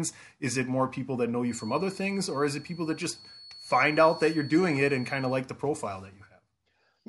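From 1.42 s to 5.44 s a feedback whistle sits behind the speech. It is a thin, steady tone near 4.4 kHz, well below the voice, swelling and fading slowly in level. The likely cause is a loudspeaker-to-microphone loop held just at the edge of feedback.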